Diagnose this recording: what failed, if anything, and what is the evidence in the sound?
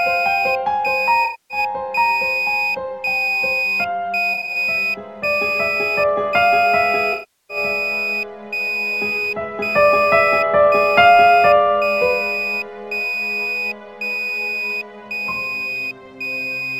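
AAC frame loss with concealment, in the codec path. Smeared patches at 1.24–1.58 s, 4.33–4.56 s and 7.13–7.57 s. The decoder refills missing frames from the last spectrum.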